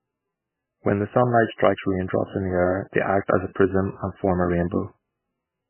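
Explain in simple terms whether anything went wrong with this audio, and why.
The speech sounds muffled and watery from start to finish, with a swirly, metallic edge and blurred s sounds. Nothing above about 3 kHz survives. The likely cause is heavy MP3 compression: short of data, the encoder cut the treble and kept switching faint details on and off.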